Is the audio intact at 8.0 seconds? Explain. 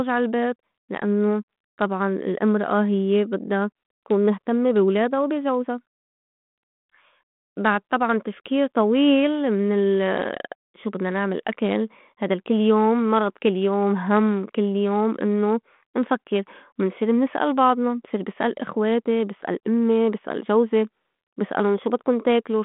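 Yes, at 8.0 seconds the audio is intact, with only the narrow telephone band of the 32 kbit/s G.726 ADPCM link audible and nothing passing above about 3.8 kHz.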